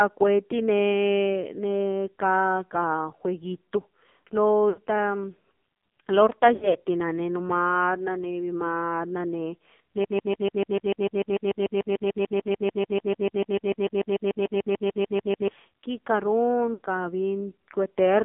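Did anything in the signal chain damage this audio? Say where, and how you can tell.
Yes. Throughout, the speech sounds buzzy and synthetic, with nothing below about 200 Hz or above 3.5 kHz. That is the codec stage: an AMR narrowband mobile codec at a low rate, 5.9 kbps, rebuilding the voice from a sparse vocal-tract model that heavily degrades it.

Short lapses at 4.70 to 4.80 s, 6.54 to 6.78 s and 16.74 to 16.80 s sound like brief drawn-out warbles that sag in level. These are lost AMR speech frames from the radio link. The decoder stretched the last good frame with fading gain, covering about 80 ms, 120 ms in scattered gaps over 200 ms, and 60 ms.

From 10.04 to 15.48 s, a 147 ms fragment repeats exactly, back to back, 37 times, and the speech that belonged there never plays. This broken-record loop was likely a playback or streaming stall that kept resending the last buffered piece.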